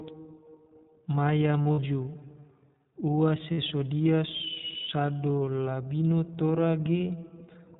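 The whole clip runs through the iLBC codec, and the damage is plain. Everything above 4 kHz is gone, so the speech sounds narrowband and a bit rough and synthetic. That's typical of how iLBC codes each frame's excitation on its own. The texture fits its 15.2 kbps mode with 20 ms frames.

On top of that there are lost iLBC frames in three spots. From 1.63 to 1.79 s, about 120 ms goes missing, scattered across 160 ms, and the longest gap is roughly 70 ms. Next, 3.52 to 3.59 s loses 60 ms in one go. Last, 6.99 to 7.01 s drops a single 20 ms frame. In each gap the decoder repeats the last pitch cycle with some noise mixed in, so you hear a short, held, slightly buzzy vowel. Because each frame stands alone, the speech snaps back right after each gap.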